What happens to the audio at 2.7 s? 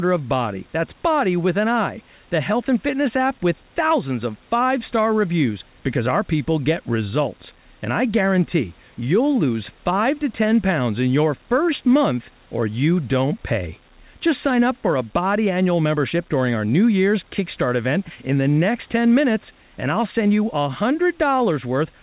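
At 2.7 s the speech is intact, carried through the narrowband call path with no dropout, glitch or other fault at that point.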